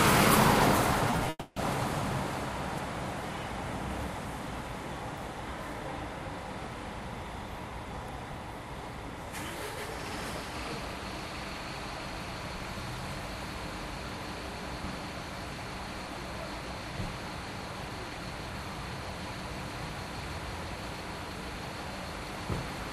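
Short concealed packet loss hits three times in quick succession, at 1.10 to 1.13 s, 1.16 to 1.19 s and 1.24 to 1.26 s. Each gap is brief, 20, 20 and then 10 ms. The receiver patches each hole by extending the preceding sound. Each one comes through as a small smear or wobble.

A long gap follows at 1.29 s and runs to 1.57 s. The last sound is stretched into a fading buzz or hiss for most of that span, then about 20 ms of near silence. The audio resumes with that stretch missing, likely a long network dropout.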